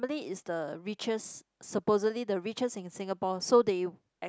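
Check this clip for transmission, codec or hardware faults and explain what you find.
Nothing wrong can be heard anywhere in this speech.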